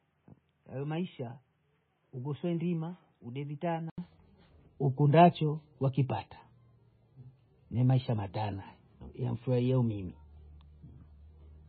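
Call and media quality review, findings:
MP3 compression, whole clip: watery, swirly speech; spectrogram shows a hard ceiling at 4.5 kHz and flickering holes between bands; likely heavy encoding, consistent with roughly 16 kbps.

Input switched to a poorer device, 0.0 to 3.98 s: duller, boxier, about 10 dB quieter, with a faint noise floor. Spectrogram is capped at 3.8 kHz. Waveform shows an 80 ms gap at 3.98 s where fuller band returns.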